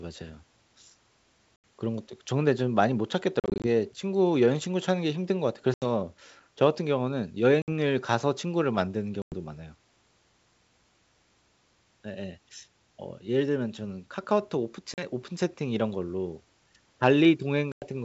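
Packet loss on an ADPCM call cuts hard-edged holes in the speech at 1.56, 3.40 (scattered over 240 ms), 5.74, 7.62, 9.22, 14.94 and 17.72 s, each dropping 40 to 140 ms. The decoder's predictor and step size lose sync, so the audio resumes with brief slight distortion.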